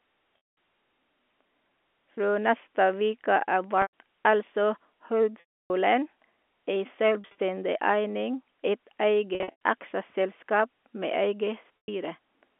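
Packet loss with pitch repetition occurs at 0.38, 2.17, 3.82, 5.40, 7.21, 9.35 and 11.78 s. The receiver repeats the last pitch period to cover each gap, so the sound holds as a buzzy tone. The losses last about 10 ms at 2.17 s, 110 ms at 3.82, 7.21 and 11.78 s, 200 ms at 0.38 s, 210 ms at 9.35 s and 300 ms at 5.40 s. The longer ones fade out and the sound then cross-fades back in. At 7.21 s and 9.35 s the losses are scattered over about 160 ms and 260 ms. This all sits within a 250 Hz to 3.4 kHz telephone band.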